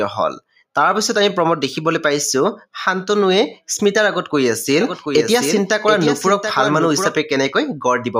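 From 0.36 to 0.76 s the noise suppressor cuts the sound, dipping it by about 18 dB for roughly a fifth of a second. The waveform visibly shrinks and spectrogram energy thins.

Between 4.81 and 7.19 s a doubled audio track appears: a full-band copy about 5 dB quieter trails by roughly 0.7 s, starting and stopping abruptly, likely from a second, slower capture path. The spectrogram shows repeated patterns offset in time.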